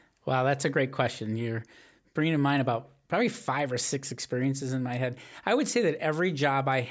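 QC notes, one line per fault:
No faults here; the speech has simply been through a call's microphone processing, which trims the lowest bass and leaves nothing above 8 kHz, and that's just how such a path normally sounds.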